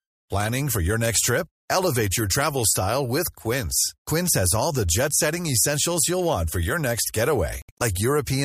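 Just after "want for your next", from 7.62 to 7.82 s, the speech drops into silent holes totalling about 93 ms, the longest about 70 ms. This is likely a Bluetooth dropout, with late packets discarded. Unlike a stall, the speech resumes further on, as if it had played on.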